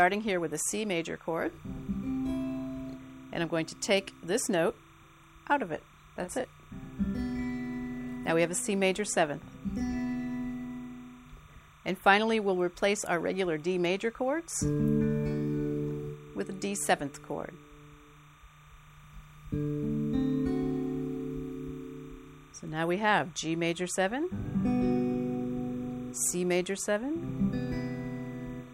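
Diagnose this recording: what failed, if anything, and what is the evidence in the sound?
Timecode bleed is present for the whole recording, a fault in the analogue wiring stage. A faint, steady chirping warble sits behind the sound from start to finish, roughly 30 dB below it, alternating between tones near 1 kHz and 2 kHz. That two-pitch pattern is linear timecode: a square wave switching frequency to encode bits, running here at 30 frames per second, leaking from an adjacent track or a neighbouring cable into the audio path.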